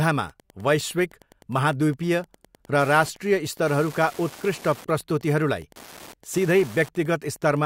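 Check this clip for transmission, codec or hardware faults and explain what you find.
The speech carries Wi-Fi interference for its whole length. A Wi-Fi radio sitting near the audio circuitry sends a beacon every 102.4 ms, and the circuit rectifies each burst into the signal. The result is a steady ticking close to ten times a second, sitting well beneath the speech, about 25 dB down. On a waveform it shows as a comb of small, evenly spaced spikes. A spectrogram shows thin vertical broadband lines at the same regular spacing, visible even in pauses.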